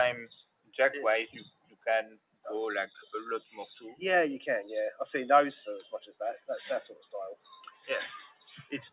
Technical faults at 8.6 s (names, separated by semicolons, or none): noise suppressor applied to music or sounds; sound cut by the noise suppressor